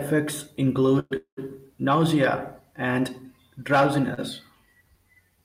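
Packets were likely held up in transit and the jitter buffer ran dry, causing two call audio freezes, from 0.99 to 1.13 s and from 1.17 to 1.39 s. Each time the last sound drones on as a fading buzz or hiss, the second trailing into about 90 ms of silence, then the speech resumes where it stopped. The sound is delayed rather than lost. At 4.14 to 4.19 s one packet arrived late, a short stall: the preceding sound is stretched by 33 ms with a slight buzz or dip before the speech carries on intact.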